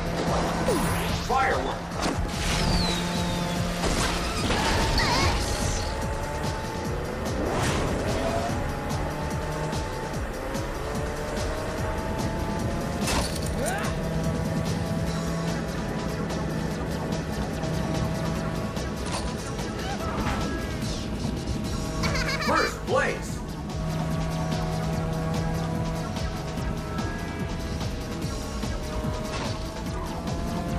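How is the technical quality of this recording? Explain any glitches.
No glitches turn up anywhere in the recording, so there is nothing to explain.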